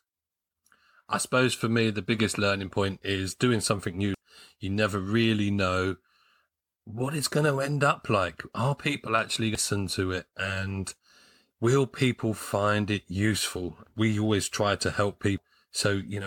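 Damaged data in the compressed stream shows up at 4.14 to 4.18 s, 9.55 to 9.58 s and 15.38 s, where the decoder misreads corrupt frames and resyncs, giving brief glitches in the speech.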